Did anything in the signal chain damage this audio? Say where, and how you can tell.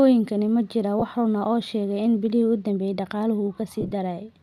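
Yes. Lost LE Audio frames at 0.99–1.02 s and 3.81–3.92 s: over the Bluetooth link, the LC3 decoder masks each gap by replaying the previous spectrum with scrambled signs, leaving brief noisy smears.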